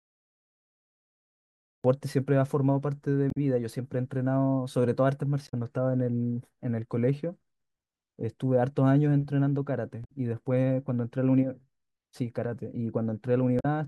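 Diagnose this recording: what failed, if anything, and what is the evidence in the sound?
The recording holds digital silence until 1.84 s, when the speech enters abruptly mid-sound with no attack or fade. This is a cut-off start at the capture stage: recording or streaming began late, so the opening of the utterance was never captured.

Short glitches break the speech at 3.28 to 3.37 s, 5.45 to 5.54 s, 10.01 to 10.08 s and 13.57 to 13.65 s. This is damaged data in a compressed stream: corrupted frames made the decoder lose sync and hunt for the next header.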